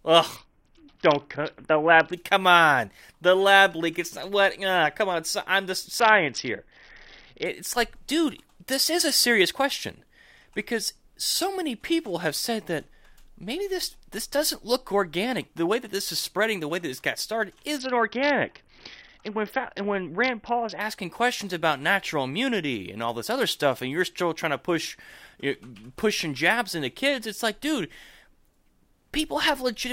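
Three times the speech turns dull and gritty, from 0.36 to 2.13 s (ending just before "come on"), from 6.00 to 7.45 s (between "come on I'm the" and "like dude this is"), and from 17.78 to 20.81 s (between "that this got started" and "questions about natural immunity"). The treble dulls and a rough quantisation noise rides on the voice, then clarity returns. These are Bluetooth SBC bit pool drops: the congested link forced the encoder to starve its upper sub-bands and quantise the rest coarsely, which fits the bit pool falling from 31 to about 6, near 55 kbps.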